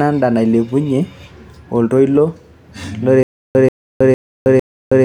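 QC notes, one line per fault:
3.23 s to end, stutter with silent gaps: one 135 ms speech fragment repeats four times every 455 ms, separated by 320 ms of digital silence, likely a stalled stream replaying its last buffer. Unlike random dropouts, the identical burst recurs evenly and speech never resumes.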